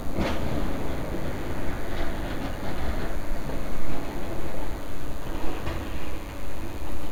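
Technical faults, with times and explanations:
Throughout, DECT cordless phone buzz: a thin, steady buzz about 30 dB below the sound, as a nearby DECT transmitter's radio bursts every 10 ms are rectified by the audio circuit. Spectrogram: horizontal lines at 100 Hz and many harmonics. Waveform: faint spikes 10 ms apart.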